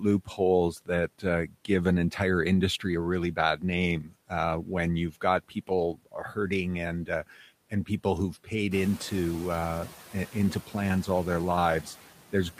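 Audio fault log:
throughout: noise suppressor artifacts. The room noise behind the speech is pushed down by about 12 dB, and it dips in the gaps and swells back under each phrase, so the background pumps with the talking instead of sitting level. Because this runs through the whole clip and follows the speech, it is the suppressor's own processing and not a change in the room.
1.47–1.69 s and 4.02–4.13 s: speech cut by the noise suppressor. The first comes just after "that uh" and before "an entire industry a". In each, around a tenth of a second of soft speech sound is pulled down by up to about 12 dB along with the background, so it sounds swallowed and faint. The suppressor has mistaken quiet speech energy for steady noise. Here the speech itself goes missing, whereas the pumping above changes only the background.
8.71–8.94 s: noise suppressor catching up. The room noise rises by about 14 dB at roughly 8.5 s, which is part of the recording, and ends up about 19 dB below the speech. 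After "and people who've paid" the suppressor's noise estimate is still set to the quieter level, so at first the louder noise gets only about 5 dB of reduction. Over about 230 ms, up to "uh into plans all", the estimate adapts and the noise sinks. That one-off settling after a jump in level is what sets it apart from the steady pumping.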